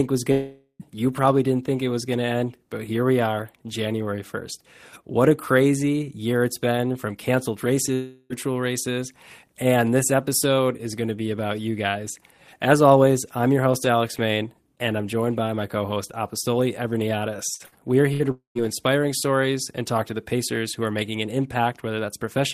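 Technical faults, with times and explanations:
0.31 to 0.83 s, long network dropout: the speech breaks off and the last sound is stretched into a fading buzz for about half a second, with roughly 70 ms of near-silence at the end. The speech then picks up further along, about 480 ms of it gone. This is likely a stall in the network stream, with the receiver covering the gap.
7.94 to 8.33 s, long network dropout: the same kind of smeared, fading continuation, this time for about 360 ms and with no silent stretch. The sound likely stopped arriving, and the speech resumes with that span skipped.
17.54, 17.66 and 18.13 s, burst of packet loss: three quick hiccups, each about 90 ms long. In each one, about 60 ms of speech is replaced by a short held buzz or hiss that dies away. That's a few packets dropping out each time, and the receiver briefly carries the previous sound forward before jumping ahead.
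18.31 to 18.58 s, long network dropout: right after those hiccups, a longer gap covers about 240 ms of missing speech. About half of it is a fading carry-over of the last sound, and the rest, about 120 ms, sits in near-silence. The likely cause is that the stream stalled outright just after the burst losses.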